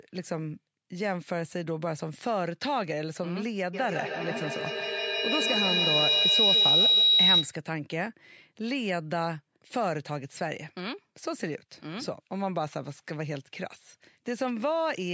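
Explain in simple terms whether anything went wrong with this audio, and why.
Feedback howl, from 3.73 to 7.62 s: two devices on the same call were close enough that each picked up the other's loudspeaker, so the sound kept looping back louder. It grew into a shrill whistle around 4 kHz, pulsing roughly every 150 ms and louder than the speech.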